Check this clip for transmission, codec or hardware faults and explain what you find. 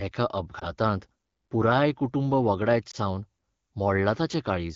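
Two brief dropouts from lost AMR speech frames, at 0.59 to 0.66 s and at 2.91 to 2.96 s, the second just after "पुराय कुटूंब वगडायत". In each, a radio error made a single 20 ms frame fail its checksum, so the AMR-WB decoder repeated the previous pitch and vocal tract settings at reduced gain. Each is heard as a short dip or warble. Around them the speech has the clear wideband character of a mid-rate HD Voice call.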